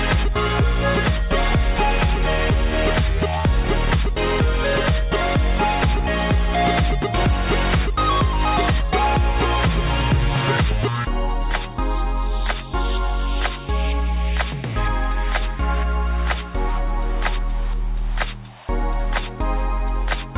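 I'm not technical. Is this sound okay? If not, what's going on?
Yes, nothing stood out as wrong when listening to it.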